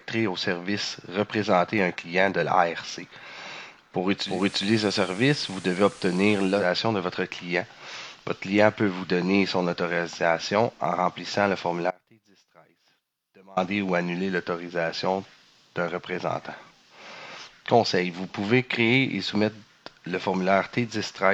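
At 4.17 s a quick quarter-second crossfade marks digital radio blending to analogue FM; until 6.72 s hiss sits roughly 20 dB under the audio. At 11.91 s the sound abruptly drops to a faint residue roughly 30 dB down for about 1.66 s, until 13.57 s, likely an audio dropout with the path left live.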